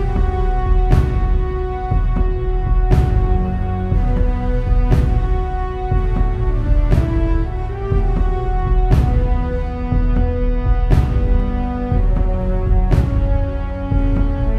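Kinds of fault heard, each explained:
Dropped samples: two sharp, isolated clicks, at 2.63 s and 11.4 s, each a single instant with no audible gap and a thin vertical line across the spectrum. They are likely caused by a handful of samples, far less than a millisecond's worth, going missing, so the waveform leaps straight to a later value. Unlike a dropout, no stretch of sound disappears. Unlike a repeating glitch or buzz, each event is one tick.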